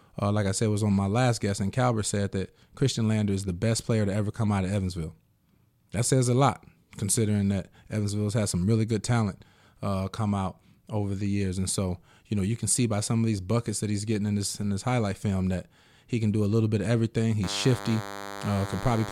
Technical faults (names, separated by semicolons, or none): DECT cordless phone buzz